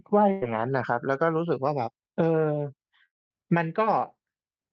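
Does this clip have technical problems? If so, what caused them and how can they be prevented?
Yes. From 0.31 to 0.43 s there is a burst of packet loss: about 100 ms of sound went missing, and the receiver continued the last sound and faded it out. On a spectrogram it shows as a smeared, repeating pattern, then an abrupt jump. Prevent it with forward error correction or a modestly deeper jitter buffer.

From 3.05 to 3.31 s a long network dropout is the likely cause of a brief fading fill and then about 200 ms of silence, with roughly 240 ms of audio lost. The waveform drops to a flat line before the sound resumes further on. A more stable connection, or wired rather than Wi-Fi, would prevent it.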